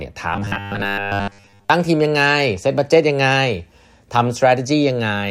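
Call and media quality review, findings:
Robotic sound from repeated short buffers, 0.34–1.70 s: metallic 100 Hz buzz. Likely underrun looping a 10 ms block; spectrogram shows flat harmonic stripes, waveform repeating 10 ms cycles.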